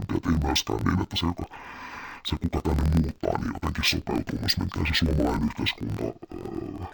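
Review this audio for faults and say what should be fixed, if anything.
Throughout the speech, interleaved audio read as planar drops the pitch a full octave while the pace stays correct. Each 23.22 ms block, which fits a 1024-sample buffer, is split into halves played together at half speed, giving a doubled, choppy sound at a 43.1 Hz block rate. A plain slowdown would also drag the timing. Prevent it by declaring the channel layout explicitly wherever buffers are passed between stages.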